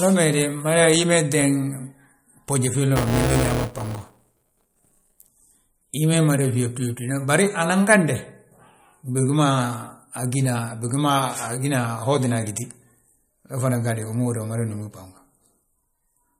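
MP3 compression runs through the whole clip, likely at a low bitrate around 48 kbps. The speech has a watery, swirling quality: with too few bits, the encoder drops quiet frequency lines, and those lines flicker on and off between frames. The damage is plainly audible.

Buffer tearing runs from 2.96 to 5.29 s and sounds like a robotic 200 Hz buzz riding on the speech. The writing and reading sides of the audio buffer have drifted out of step, which points to buffer periods of about 5 ms. In each period, roughly a fifth of the audio is stale material from about 10 ms earlier, with hard joins at both ends of that stretch.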